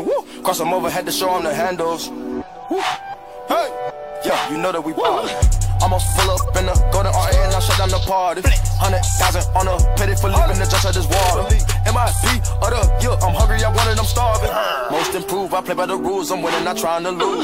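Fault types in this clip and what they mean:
Corrupt frame decoded: damaged compressed frames played as if valid, so misread gains put energy at wrong frequencies, giving four short bursts peaking around -5 dBFS at most, each lasting a few frames; unlike dropouts or concealment, sound is added, not smeared.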